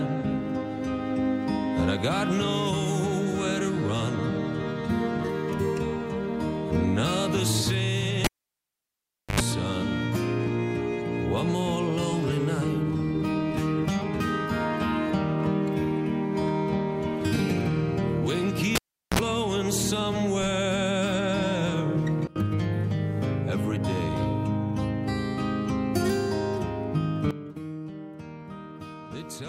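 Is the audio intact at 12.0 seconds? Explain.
Yes, the audio is intact at 12.0 seconds, with no dropout, glitch or other fault at that point.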